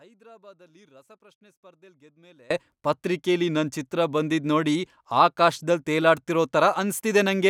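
Speech, opening inside an audio dropout to a faint residue: from the start until 2.51 s the signal sits roughly 30 dB down, a leak rather than true silence, then returns abruptly rather than fading back, which sets it apart from a pause. A broken connection is the likely cause.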